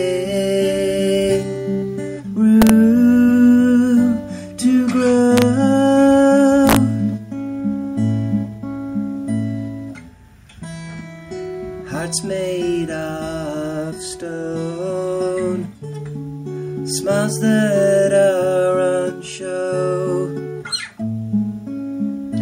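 At 2.62 to 2.70 s, 5.38 to 5.42 s and 6.67 to 6.76 s, the loudest peaks break into violent cracks, a case of integer overflow. Peaks that went only about 1 dB, or barely any amount, past full scale wrapped around to the opposite extreme of the sample range instead of being held at the limit. Clipping would flatten those peaks into a buzzy, fuzzy edge. Here each peak snaps across the whole range, producing a far sharper, explosive crack.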